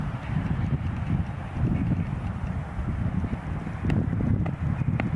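No technical faults can be heard in this audio, so there is nothing to describe in time order.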